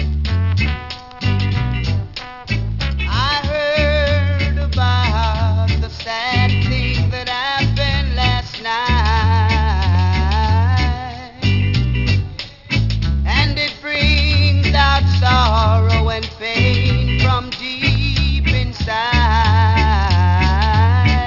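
Aliasing runs through the whole clip. The sound was brought down to a lower sample rate with no anti-alias filter first, and the fold point at 6 kHz fits a reduction from 44.1 kHz to a 12 kHz rate. Everything above 6 kHz mirrors back below it as unrelated, inharmonic tones, sitting roughly 20 dB under the wanted signal. High, bright content comes out gritty and metallic, and the spectrum stays dense right up to the 6 kHz edge.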